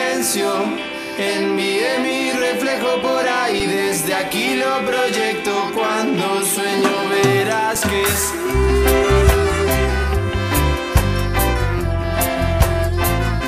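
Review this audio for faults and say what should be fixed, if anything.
Underrun with held sample at 3.60 s and 7.75 s: the output buffer ran dry, so the waveform froze at its last value for roughly 4 ms and skipped the missing audio. To prevent it, give the playback buffer more headroom or lower the processing load so the audio thread always refills it in time.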